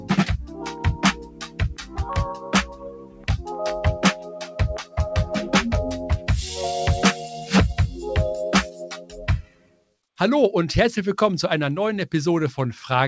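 A noise suppressor built for speech stays on across the whole clip and treats steady parts of the sound as noise. Its gain swings by roughly 15 dB. Attacks pass while held tones and tails sink, so the level pumps and thins. The sound is cut by the noise suppressor in six places. The deepest drop is about 13 dB at 0.42 to 1.61 s, about 11 dB at 1.78 to 2.04 s, and about 14 dB at 2.34 to 3.45 s. Later dips reach about 8 dB at 4.19 to 4.58 s, about 6 dB at 7.23 to 7.52 s, and about 14 dB at 8.65 to 9.95 s. Sustained sound there fades or loses its decay. Beneath this, the call path leaves nothing above 8 kHz.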